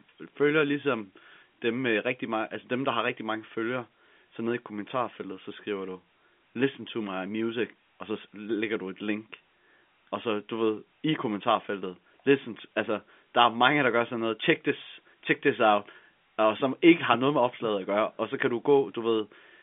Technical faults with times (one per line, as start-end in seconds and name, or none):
none